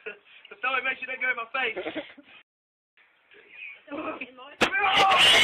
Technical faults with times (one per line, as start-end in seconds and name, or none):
2.42-2.97 rebuffering stall